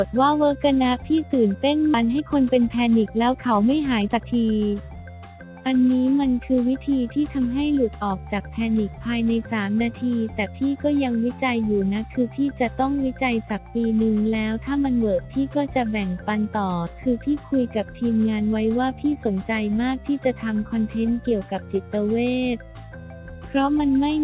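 At about 1.94 to 1.96 s there's a skip ahead: roughly a second of audio just isn't there, and playback jumps straight from one side of the hole to the other with no silence or fill between them. That's what happens when a chunk gets dropped, either lost in transit or thrown out by the jitter buffer because newer audio was already queued up behind it. Since the join is nearly direct, it comes across as a hard splice.

Right after that, from about 2.03 to 5.04 s, you get a jitter buffer speed-up. The buffer is holding more audio than it wants, and the receiver trims it back by repeatedly cutting out tiny slices a pitch period or so long. Over those three seconds it removes something like half a second, so the audio plays at about 116% speed. The pitch stays put but everything sounds rushed. The whole clip also carries the narrow G.711 mu-law band, with nothing above 4 kHz.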